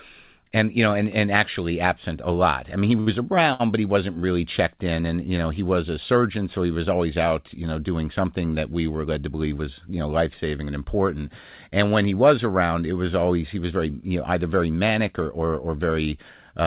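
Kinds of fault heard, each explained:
Short stall from a late packet: at 3.0 s, after "lot I mean he", and at 3.53 s, before "but he wasn't really", a late packet emptied the jitter buffer. The last sound is held for 65 ms and 62 ms, then resumes with nothing lost.
Jitter buffer speed-up: from 9.04 to 9.36 s, between "something that we were" and "was you know", the receiver shed excess buffered audio by cutting short pitch-period pieces, roughly 50 ms in total. The speech runs at 113% speed, hurried but at unchanged pitch.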